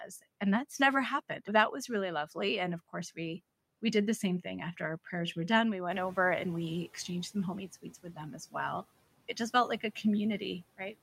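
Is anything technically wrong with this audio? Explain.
Yes, there are two noise suppressor faults.

From 5.9 to 6.91 s, just before "exchanged some homemade", the noise suppressor is catching up. The room noise rises by about 10 dB around 6 s, and the suppressor's noise estimate takes about a second to follow. The louder noise leaks through at first, then sinks by about 10 dB. On a spectrogram this looks like a broadband haze that brightens and then fades.

From 7.82 to 8.18 s, just after "exchanged some homemade", the suppressor treats part of the speech as noise. It cuts the speech by up to about 12 dB over roughly a tenth of a second, so those sounds seem swallowed. The waveform shows a brief notch in the envelope, and the spectrogram shows speech energy thinning there.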